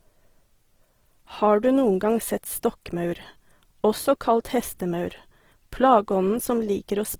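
The whole clip is rough and grainy up to 20.3 kHz, likely Opus compression in CELT mode noise-filling bit-starved bands, which fits about 16 kbps.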